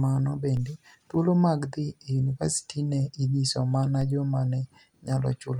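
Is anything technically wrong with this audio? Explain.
Yes. A DC step occurs twice, at 0.57 s just before "thuolo mag dhi e" and at 4.01 s between "iniyiso mania" and "joma ni". The zero line jumps by about -28 dBFS, then drains away through a 5 Hz high-pass, giving a low thump under the speech each time.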